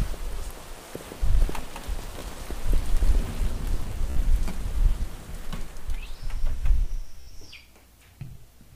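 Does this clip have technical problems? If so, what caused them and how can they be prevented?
Yes. This is Bluetooth stutter. The wireless link dropped or delayed audio packets, and the receiver kept replaying its last buffered slice until fresh data arrived. At 2.20–2.22 s a single short repeat covers about 15 ms of missing sound. At 4.10–4.17 s and 7.21–7.30 s longer runs of repeats cover about 61 ms each, which points to several consecutive packets lost and is heard as a brief machine-gun buzz. Each time, the sound resumes further along, as though it had kept playing. To prevent it, keep the devices close with a clear line of sight and away from crowded 2.4 GHz interference, or use a wired connection.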